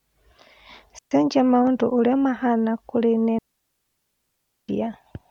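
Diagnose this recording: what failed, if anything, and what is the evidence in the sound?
Digital wireless dropout at 0.99–1.11 s and 3.39–4.69 s, the second right after "mahana kũri". The radio link lost too much data, so the receiver muted with a brief fade, leaving clean near-silent holes of 0.13 s and 1.3 s with no noise bursts around them.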